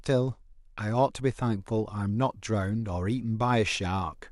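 A screen or video cable is coupling into the audio path of this speech recording, giving video or display buzz: a 60 Hz field-rate buzz with hash above it, roughly 45 dB below the speech, from 1.16 s to the end.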